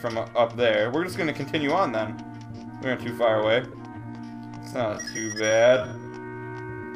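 The audio contains two faults. A corrupt frame was decoded from 3.72 to 3.74 s: damaged compressed data, a couple of frames' worth, was played anyway, giving a brief noisy blip peaking around -25 dBFS. From 3.96 s to the end, the pace drops abruptly to 0.51x while pitch holds, so the audio drags. This is likely a time-stretched section in which software repeated short pieces to lengthen the audio.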